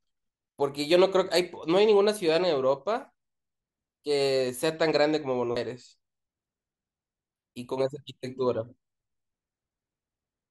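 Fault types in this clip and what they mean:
CD skip: the laser lost its track and landed on another turn of the spiral, so near 5.56 s the speech briefly mutes with a tick and jumps.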